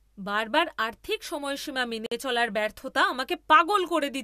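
At 2.06 to 2.12 s, between "বারবার আর্থিক সময়সীমা" and "চলার ব্যর্থতা", a gap at a join of encoded pieces cuts a 52 ms hole into the speech. Separately encoded segments were butted together with their encoder delay and end padding still in place. The waveform drops flat, and the spectrogram shows a narrow blank column with smeared edges before the speech resumes where it left off.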